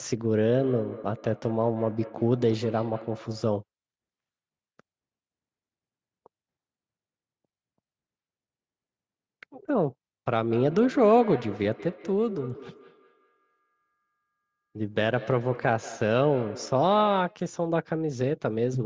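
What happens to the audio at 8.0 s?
Nothing goes wrong at 8.0 s: the speech carries on intact through that moment, with only the ordinary trimming of the lowest bass and the top above 8 kHz from the call's microphone processing.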